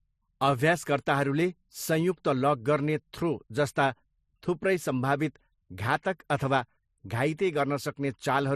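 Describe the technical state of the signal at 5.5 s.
At 5.5 s you're hearing what's there for the whole clip: speech carrying different codec artefacts heard together, with nothing above 15.2 kHz. That's likely transcoding between lossy codecs, with the character pointing to HE-AAC around 48 kbit/s re-encoded as MP3 around 42 kbit/s, each pass stacking its own artefacts.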